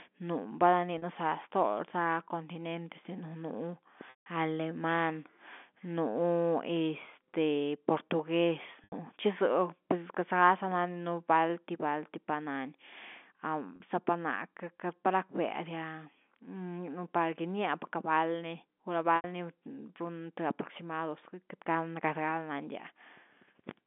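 At 0.98 s and 13.76 s (about 40 ms each), 8.84 s and 19.16 s (about 80 ms) the speech briefly holds a buzzy, frozen tone. At 4.1 s a 160 ms gap fades to silence before cross-fading back. These are packet loss with pitch repetition: the receiver loops the last pitch period over missing audio, fading it within about 50 ms, within the narrow G.711 telephone band.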